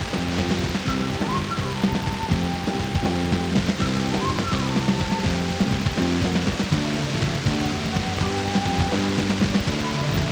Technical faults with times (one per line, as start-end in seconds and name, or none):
none